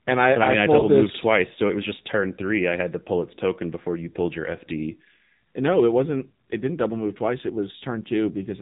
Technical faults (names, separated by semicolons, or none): AMR narrowband mobile codec; lost AMR speech frames